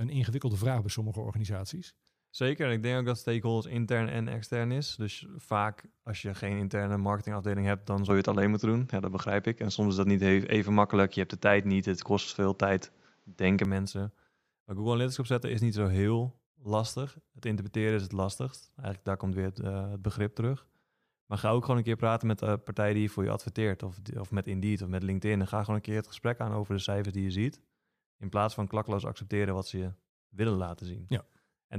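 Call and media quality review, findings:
8.10–13.65 s, after "marketingafdeling hebt dan zul": speech turns dull, nothing above 7.6 kHz, level shifts about 5 dB, new noise floor. Likely input switched to a poorer device, not codec bandwidth drop.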